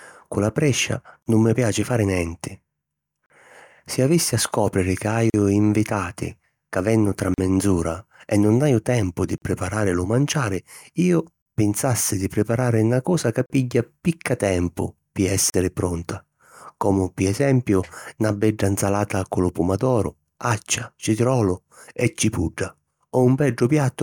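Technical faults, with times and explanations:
1.23, 3.26, 5.30, 7.34, 9.38, 11.42, 13.46 and 15.50 s, gap at a join of encoded pieces: the speech drops out for 35 to 40 ms roughly every 2 s, first between "cu la prescia" and "nun mi piaci fari", then picks up exactly where it left off. The speech was likely encoded in 2 s chunks and butted together untrimmed, so each join carries the encoder's start-up silence and last-frame padding. The codec smears the edges of each gap.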